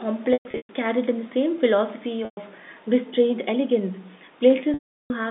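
Brief buzzy holds fading into silence break the sound at 0.33 to 0.69 s (scattered, longest 120 ms), 2.25 s (120 ms) and 4.74 to 5.10 s (360 ms). This is packet loss with pitch repetition on the G.711 telephone line: the receiver replays the last pitch period, then fades it.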